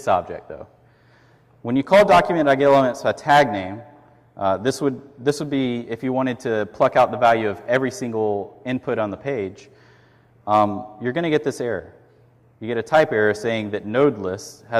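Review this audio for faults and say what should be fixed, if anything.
Nothing stood out on listening, so there is nothing here that calls for fixing.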